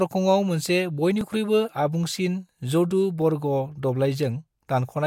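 Speech, with two little stutter-clicks at about 1.21 s and 3.22 s. That's overlapping chunks: the audio was handled in 2.0 s pieces, and each new piece starts a touch before the previous one finished, so about 6.5 ms of sound gets played twice at the join. That tiny doubled slice breaks the waveform's continuity, which is why you hear a click rather than an obvious repeat, landing right on the chunk boundaries.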